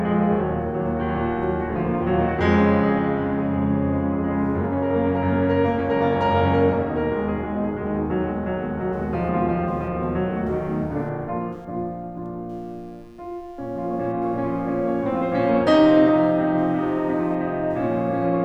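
From 8.93 s right through to the end, there's computer activity noise sitting under the music: a buzzy, chirping texture pulsing at something like 150 Hz, roughly 45 dB below the music. It's faint. What's happening is that the machine's changing load (processor, graphics or even mouse movement) is pushing around the ground the audio circuit shares, so the noise tracks the computer's activity rather than anything in the music.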